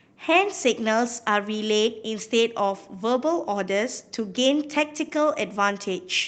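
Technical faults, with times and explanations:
No technical faults are audible in the speech, which has come through a WebRTC call path whose top end stops near 8 kHz and whose coding texture fits Opus at around 32 kbps, the path working as intended.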